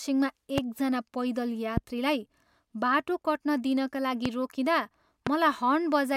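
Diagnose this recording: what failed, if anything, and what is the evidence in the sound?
Four loud pops cut across the speech at 0.58–0.60 s, 1.77–1.80 s, 4.26–4.28 s and 5.27–5.29 s. Each is a single sharp pop lasting about 20 ms and peaking roughly 15 dB above the speech, which continues underneath. The likely cause is a voltage step or pulse entering the signal path from a plug, switch, static discharge or driver glitch. On a waveform each pop is an isolated spike towering over the speech envelope, and on a spectrogram it is a thin broadband vertical stripe.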